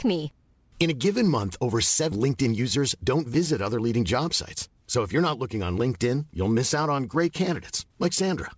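At about 2.12 s, right after "a given month over", the speech lurches forward with no audible gap. The two sides butt together almost seamlessly, but roughly 0.7 s of talk is simply gone. This is a skip ahead: a stretch of audio was discarded, either lost in transit or dropped when the jitter buffer overflowed, while later audio was already queued. Playback resumed from the newer material and joined it directly to what came before.

From about 2.24 s to 3.36 s, leading into "other leading job sites", the talker sounds briefly rushed. Delivery runs at about 108% of normal speed while the pitch stays put, so it comes across as hurried rather than squeaky. This is a jitter buffer speed-up. The buffer was holding more audio than its target, so the receiver repeatedly cut out tiny slices one or a few pitch periods long, about a tenth of a second in total, to bring the delay back down. Throughout the clip the sound is band-limited, with nothing above 8 kHz, which fits a wideband call codec such as G.722.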